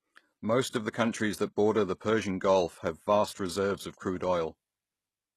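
A speech clip with HE-AAC compression as the likely cause of plainly audible codec damage throughout: nothing above 12.3 kHz, and rebuilt treble that makes sibilants gritty, consistent with roughly 16 kbps. Pre-echo appears from 0.70 to 0.73 s, where hiss smears about 33 ms ahead of the attack on "of the countries that".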